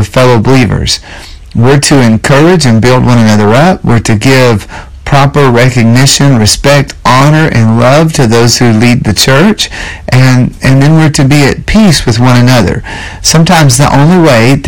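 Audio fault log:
Throughout, hard clipping: the speech is driven about 20 dB past full scale, so nearly a third of the waveform is sliced flat, giving a constant harsh fuzz on every loud syllable; the abrupt flat tops add high harmonics far more strongly than soft saturation would.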